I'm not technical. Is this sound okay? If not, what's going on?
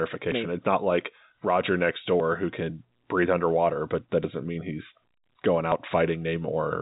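No. The speech jumps at 0.32, 2.2, 4.24 and 5.72 seconds. Each time, about 40 milliseconds of sound is missing. This is likely a dropped buffer (overrun): the recording software fell behind, and a chunk was lost. Listen just before "who can breathe underwater" and just after "mean he's going".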